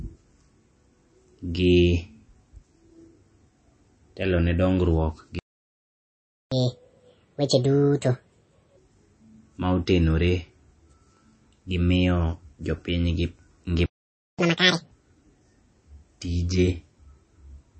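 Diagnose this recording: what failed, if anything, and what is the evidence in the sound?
At the codec stage, the speech carries plainly audible damage that is likely from MP3 compression at a low bitrate, consistent with around 32 kbps. Nothing is present above 8.4 kHz. On a spectrogram this shows as a flat ceiling across the whole clip, with speckled gaps below it where weak frequency lines drop in and out between frames. The encoder, short of bits, discarded the treble and thinned the quieter detail, which leaves sibilants watery and swirly.

At the playback stage, the sound stops mid-flow twice, from 5.39 to 6.52 s (about 1.13 s) and from 13.86 to 14.39 s (about 0.53 s). Both are likely playback stalls, where the player ran out of data or its thread was blocked. A waveform view shows these as flat-line gaps with no decay tail, and a spectrogram shows blank vertical bands. Speech resumes abruptly at each edge.

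Each stall is followed by catch-up at higher speed as the player drains its backlog by resampling. From 6.52 to 8.77 s the audio runs at 1.5 times normal speed, with pitch raised about seven semitones. From 14.39 to 14.91 s it runs at double speed, about ten semitones higher. A spectrogram shows harmonics and formants shifted upward and compressed in time, then dropping back to their normal spacing when the catch-up ends.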